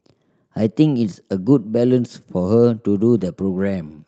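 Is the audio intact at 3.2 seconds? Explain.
No. From 3.17 to 3.27 s there is a lost packet rebuilt from error correction. The sound does not drop out. For about 60 ms it turns rougher and noisier, which fits three lost packets. Each following packet carried a low-bitrate copy of the missing one, using Opus in-band forward error correction. The decoder played those copies in place of the originals. The gap is filled, but at lower quality.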